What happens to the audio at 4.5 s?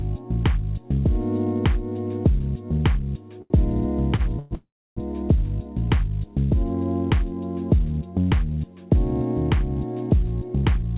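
Two call audio freezes fall here: 4.39 to 4.53 s, then 4.55 to 4.99 s. Packets were likely held up and the jitter buffer ran dry, so the receiver stretched the last sound into a fading buzz (about 0.12 s, then about 0.42 s, the last 0.3 s of it silent) before resuming where it left off. On a waveform that shows as a decaying smear then flatline; on a spectrogram, horizontal streaks fading to blank, all below the 4 kHz ceiling of the narrowband call path.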